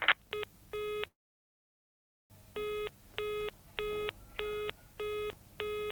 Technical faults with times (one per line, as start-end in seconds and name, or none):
1.07-2.32 call audio freeze